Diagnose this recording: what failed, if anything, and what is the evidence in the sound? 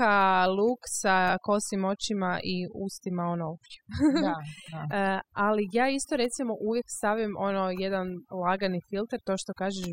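The trouble here is overdone noise removal, somewhere in the processing chain, and it's there for the whole clip. The suppressor was set far too hard, so any frequency band that sat close to its noise estimate got pulled right down or switched off. That leaves the gaps between phrases almost dead silent apart from little twinkling specks. The quieter parts of the speech get swallowed along with the noise.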